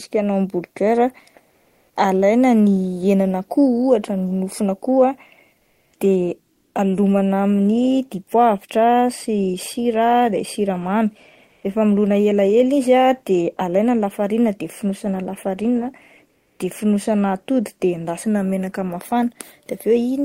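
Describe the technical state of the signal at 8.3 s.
At 8.3 s the speech signal is intact, with no audible fault at that point.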